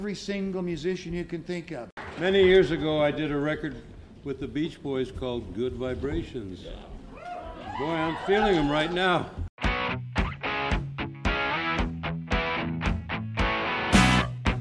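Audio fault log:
Nothing stood out on listening.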